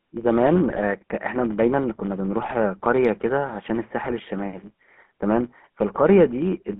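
From start to end the sound carries a steady buzz at about 93.8 Hz. This is a filter restarted on every block. The filter loses its state at each block boundary and starts again from zero, so every block opens with a small transient. The repeat rate fits a 512-sample block at 48 kHz. The ticks are spaced closely enough to fuse into a buzz, and that buzz rises and falls with the level of the speech.

The speech also has GSM full-rate codec coloration throughout, and it is plainly audible. The band runs only from about 150 Hz to 3.4 kHz, with nothing above that. The codec rebuilds the voice from a vocal-tract model excited by sparse, regularly spaced pulses, and this is what makes voiced sounds buzzy and gravelly. Together with the narrow band, these traits point to the 13 kbps full-rate scheme.

GSM bit errors break through three times: from 0.68 to 0.81 s, from 2.42 to 2.54 s, and from 4.04 to 4.14 s. 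Each burst lasts about a tenth of a second, which suggests a handful of consecutive frames were hit. Corrupted filter, pitch and gain parameters reached the decoder in those frames, so the spectrum bends and the level jumps from one frame to the next. The voice turns into short squawks, pops and gargling, then recovers once clean frames return.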